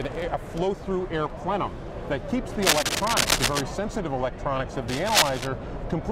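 Cable scratch noise appears from 2.62 to 3.61 s, somewhat louder than the sound itself, and again from 4.88 to 5.47 s at roughly equal level: dense, ragged rustling bursts, likely from a worn cable or connector being moved so its contact resistance fluctuates rapidly.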